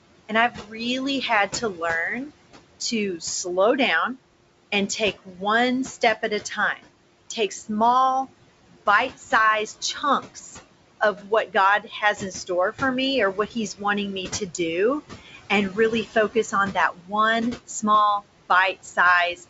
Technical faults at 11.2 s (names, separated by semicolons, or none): noise suppressor artifacts; speech cut by the noise suppressor